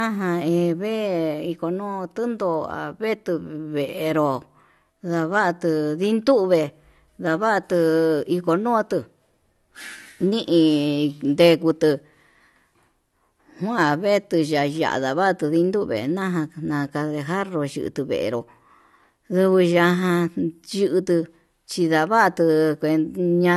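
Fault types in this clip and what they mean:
low-bitrate audio saved at a high bitrate: speech cuts off at 12.4 kHz with old coding artefacts, unlike a true high-bitrate MP3; likely re-encoded from low bitrate.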